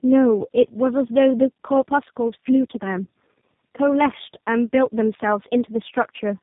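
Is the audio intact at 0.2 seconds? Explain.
No. Tandem speech coding runs throughout. Three speech codecs in sequence re-encode earlier losses, leaving rough, muffled, warbly speech with nothing above 3.8 kHz.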